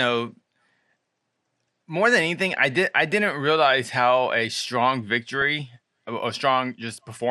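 From start to end, the speech has the dull, gurgling quality of MP2 compression. The likely cause is MPEG Layer II coding at a low rate, which fits about 80 kbps. Too few bits reach the upper sub-bands, so they switch off and flicker back. The bands that remain are coarsely quantised. The result is clearly audible: muffled highs and a granular edge.

At 5.41 s, just after "realize how a strong", DAB burbling breaks in. Bit errors have slipped past error correction into the audio data, which points to a low error rate of around a tenth of a percent. A few frames carry wrong samples, putting short blips of noise into single sub-bands over the voice.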